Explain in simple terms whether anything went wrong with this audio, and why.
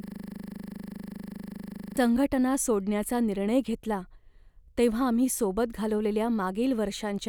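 The clip opens with a system hang loop, already under way at the start and lasting until 1.97 s. A 40 ms slice of sound repeats 48 times, making a steady 25 Hz buzz. The computer likely froze while replaying one buffer. Normal speech resumes with "संघटना सोडण्याचा निर्णय घेतला".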